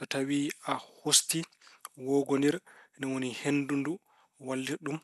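Likely MP2 compression at a low rate, one that fits roughly 80 kbps, left too few bits for the upper sub-bands throughout the speech, so nothing remains above about 12.1 kHz. The speech sounds dull, with a plainly audible gurgling, granular distortion from coarse quantisation.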